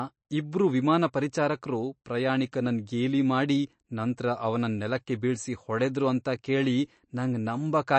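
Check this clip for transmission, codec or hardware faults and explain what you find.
One fault runs through the whole clip. The speech has nothing above about 8.3 kHz and sounds watery and swirly. The likely cause is MP3 compression. Short of bits, the encoder cut the treble and switched weak components on and off between frames. The damage is plainly audible and fits a low bitrate near 36 kbps.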